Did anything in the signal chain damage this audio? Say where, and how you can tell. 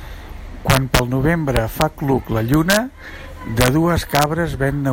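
Yes: integer overflow in the sample-format conversion, where gained-up samples wrapped to the opposite sign instead of saturating, producing harsh cracks at 0.70–0.99, 1.57–1.82 (just before "cluc la"), 2.54–2.77 (just after "cluc la"), 3.61–3.68 and 4.15–4.23 s. Peaks only about 0 to 1 dB over the limit flip across the full range, so these sound far sharper than clipping.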